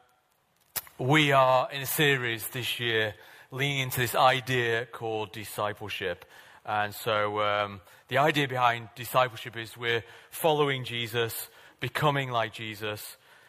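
No technical faults can be heard anywhere here.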